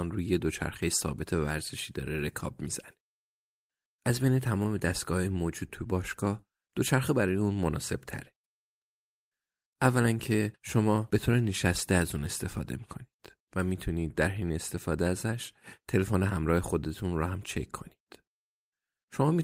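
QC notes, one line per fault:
No faults found on the speech track; nothing to log.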